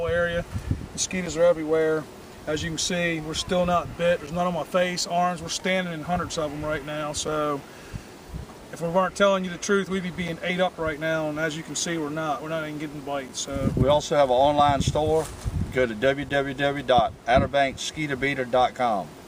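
A gap between chunks occurs at 1.26, 4.27, 7.27, 10.28, 13.29 and 16.29 s. The audio arrives in 3.0 s pieces, with 6.5 ms of silence inserted at each join. Unlike dropouts, nothing is lost. The short, hard-edged holes simply recur at a strictly regular spacing.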